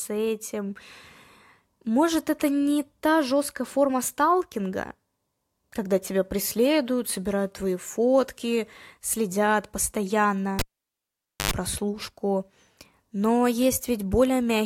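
Cable pulled and plugged in, from 10.59 to 11.51 s in this speech clip: a pop as the live lead comes out, about 0.87 s of near silence, then roughly 89 ms of 50 Hz mains buzz while only the plug tip makes contact, and a second pop as the sound returns.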